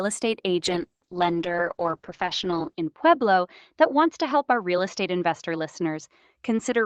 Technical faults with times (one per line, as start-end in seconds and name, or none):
0.66-6.85 call bitrate drop